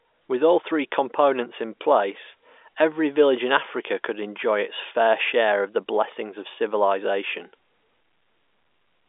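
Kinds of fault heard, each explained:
Nothing stood out as a fault on listening to this speech recording.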